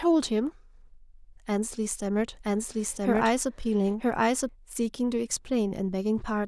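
From about 1.89 s to 4.49 s there's a doubled audio track: a second full-band copy of the speech runs roughly a second behind, at about the same loudness, with no room tail, starting and stopping abruptly. Likely a slower capture path feeding in twice.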